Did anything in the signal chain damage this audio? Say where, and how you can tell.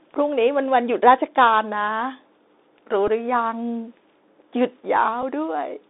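Yes. The speech runs through the Bluetooth CVSD headset codec on the headset link for the whole clip. The line band sits at about 250 Hz to 3.7 kHz, so nothing above that survives. The codec damage is plainly audible: s sounds turn scratchy, loud bright passages distort where the one-bit delta modulator's adaptive step cannot keep up, and a granular hiss lies under the speech. All of this fits a 64 kbps CVSD link.

The second fault is a Bluetooth headset packet repeated, on the same wireless link. At 3.08 s about 3.8 ms of audio is replaced, which sounds like a single small tick. At 5.22 s a longer gap of about 11.2 ms gives a short rough burst. In each case voice packets were lost and the chip decoded the previous packet's bits again. The longer event points to roughly three consecutive repeats at the 3.75 ms packet rate.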